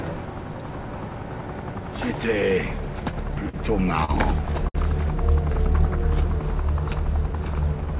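Three short stalls from late packets, at 3.49, 4.05 and 4.68 s. Each time the jitter buffer ran dry, so the last sound gets held for 44, 39 and 60 ms, then carries on with nothing lost. The audio stops around 4 kHz, which fits a G.711 call path.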